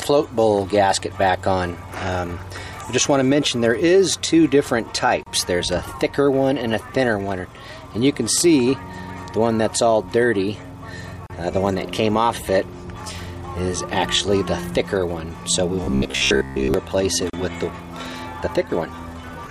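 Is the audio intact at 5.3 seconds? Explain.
No. A gap at a join of encoded pieces runs from 5.23 to 5.26 s, about 33 ms. Encoder start delay and last-frame padding stayed in, so continuous sound drops out briefly, then resumes where it stopped. The waveform shows a brief silent notch with smeared edges, and the spectrogram a thin vertical blank band.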